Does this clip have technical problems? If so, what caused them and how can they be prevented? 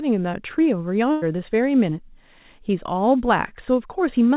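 Yes. There is a burst of packet loss from 1.12 to 1.24 s. Roughly a tenth of a second of audio never arrived in time. The receiver filled the gap by extending the last bit of sound and fading it down. That concealed stretch runs about 96 ms. The speech then picks up further along, with about 100 ms skipped. It passes through a narrowband call path with nothing above 4 kHz, which fits G.711 A-law. Steadier network links, forward error correction, or a slightly deeper jitter buffer would help prevent it.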